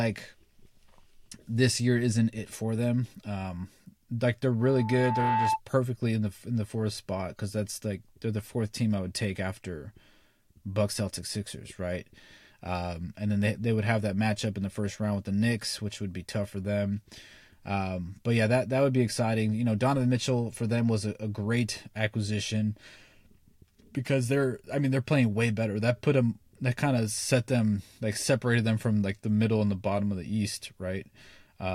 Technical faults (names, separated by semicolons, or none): loudspeaker feedback squeal